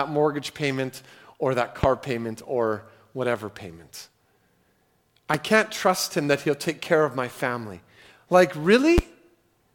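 Three loud pops cut through the speech at 1.84 to 1.86 s, 5.34 to 5.37 s and 8.98 to 9.01 s, each a single sharp thump peaking about 20 dB, then twice about 15 dB, above the voice. A brief electrical pulse, likely static or a switching glitch, is the cause. Speech continues intact underneath, which separates these pops from dropouts.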